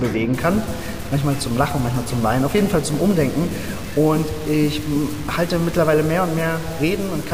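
From 0.34 s to the end, the audio turns grainy, with distortion that tracks its level, and quiet stretches sputter or drop out. Low bit depth without dither is the likely cause: truncation to about 5 bits leaves error roughly 20 dB below the signal. The waveform shows visible staircase steps, and the spectrogram shows signal-dependent hash spread across the band.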